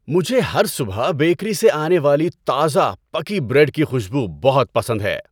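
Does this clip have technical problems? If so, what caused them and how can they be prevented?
No, this clip has no technical problems, so there is nothing to explain or prevent.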